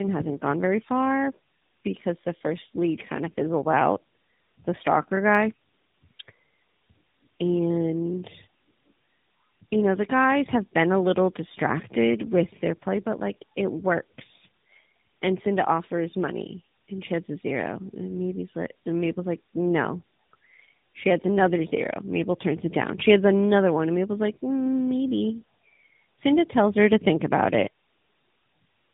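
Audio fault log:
throughout: tandem speech coding. The speech passed through GSM full rate at 13 kbit/s, then G.711 A-law at 64 kbit/s, and finally AMR-NB at 12.2 kbit/s. That means two speech codecs in a row, with the second re-encoding artefacts the first had already baked in. The result is rougher, more muffled and more warbly than a single AMR-NB pass at that rate, which is what separates it from ordinary narrowband coding.
5.35, 17.94: dropped samples. Each is a single sharp click, a thin vertical line across the spectrum with no audible gap. The likely cause is a couple of missing samples, a tiny fraction of a millisecond, so the waveform steps straight to a later value. Packet loss or a dropout would leave a silence or a smeared patch lasting tens of milliseconds. Here no sound is missing, only the instant discontinuity.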